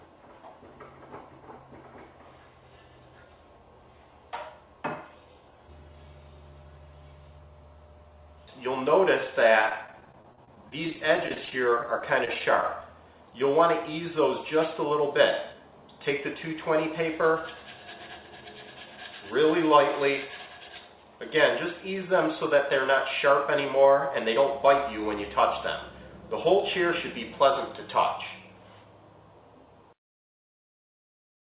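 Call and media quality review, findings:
Repeated packet loss (robotic sound), 9.62–12.83 s. Choppy stretch with bits dropping out, 35 small holes, the longest 26 ms, about 320 ms of audio gone in total. Receiver concealment keeps stretching the last snippet over each hole, so roughly 13% of that span is patched-in sound. Band stops at 4 kHz, which fits G.711 at 64 kbps on the call path.

Jitter buffer speed-up, 15.00–15.69 s. Sound hurries along at about 105% speed with the pitch unchanged. The buffer had built up extra delay, probably after late packets landed in a bunch, so it trimmed short pitch-period chunks, around 40 ms total, to catch back up to its target depth.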